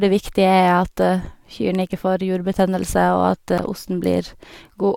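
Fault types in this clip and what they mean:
Compressed frames skipped: the decoder dropped whole compressed frames, either missing from the stream or rejected as damaged, so playback jumps ahead by roughly 20 ms of speech. Just after "ikke får jurbetennelse og", around 3.58 s, the speech jumps ahead.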